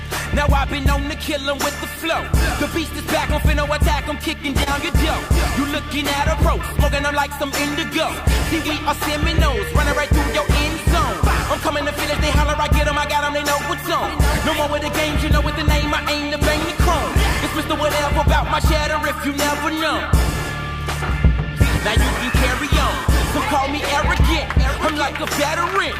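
At 4.63 to 4.68 s there is a short concealed packet loss: a brief stretch of audio failed to arrive in time, and the receiver papered over roughly 28 ms of it by extending the preceding sound before blending back, while about 20 ms is simply gone. The result is a quick smear or wobble rather than silence. That is what separates it from a plain dropout, which would leave an audible hole, or from a click, which has no synthetic continuation.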